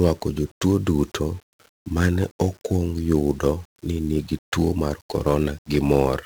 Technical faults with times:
0.00-6.25 1-bit DFPWM compression

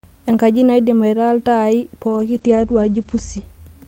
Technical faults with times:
2.08-3.49 call bitrate drop

